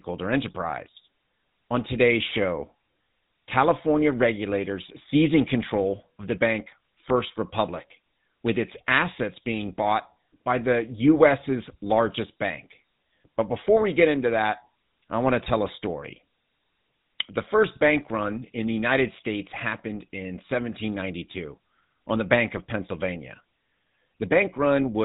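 The whole clip runs through the GSM full-rate codec, fitting its 13 kbps: coarse pulse-driven excitation and nothing above 4 kHz make the speech plainly buzzy and gravelly. Then GSM bit errors hit between "that I want to" and "a story", from 15.44 to 15.54 s, scrambling the decoder's filter and gain values into a gargling squawk. They hit again from 22.57 to 22.60 s as a short pop.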